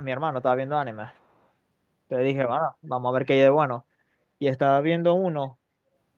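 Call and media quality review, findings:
Echo leak, 1.14 to 1.25 s: very faint delayed copy of the speech, lagging about 318 ms. Likely far-end echo canceller letting loudspeaker pickup through. A distinct repeat at a fixed lag, unlike room reverb's continuous smeared decay.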